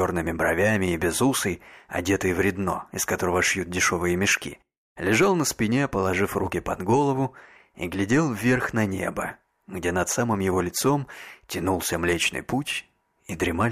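From 10.42 s to 13.40 s, sample clock jitter appears: the converter clock wanders by a couple of microseconds, adding roughness roughly 30 dB below the signal that grows on loud, bright passages.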